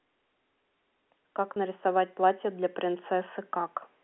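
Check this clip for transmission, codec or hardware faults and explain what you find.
One transmission fault can be heard within the 250 Hz to 3.4 kHz band of the G.711 telephone line. Packet loss with pitch repetition occurs from 1.54 to 1.56 s. A 20 ms gap, consistent with one lost packet, was filled by repeating the last pitch period. Because the gap is so short, it sounds like a briefly held, buzzy note in the speech.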